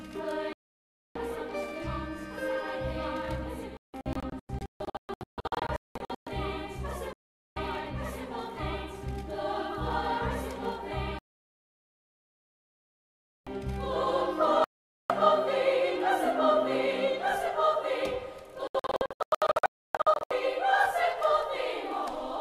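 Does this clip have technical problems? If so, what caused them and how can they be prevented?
Yes, there's a digital broadcast dropout, six times: 0.53–1.16 s, 3.77–6.27 s as scattered short holes, 7.13–7.57 s, 11.19–13.47 s, 14.64–15.10 s, and 18.67–20.31 s, again broken up. The receiver lost the signal or got corrupted frames and muted until clean ones returned, so that audio is simply gone. Better reception, with a stronger antenna or a better-placed one, should prevent it.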